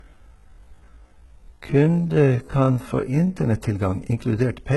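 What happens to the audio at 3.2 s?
At 3.2 s the audio is still inside a time-stretched section that runs from the start to 3.32 s. The speech plays at about 0.54 times its normal pace, with its pitch unchanged, most likely because software repeated short slices to lengthen it. It drags, then the pace jumps back at 3.32 s. A spectrogram shows harmonics drawn out in time, and the waveform shows repeating cycles.

The whole clip is also low-bitrate audio saved at a high bitrate. It keeps the artefacts of an earlier low-bitrate encode, which points to a low-bitrate encode like 16 kbit/s HE-AAC that was likely later re-saved as a high-rate MP3. The re-encode cannot restore what was lost.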